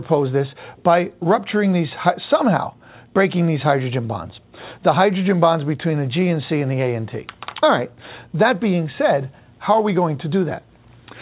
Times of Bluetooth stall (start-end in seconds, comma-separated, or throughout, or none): none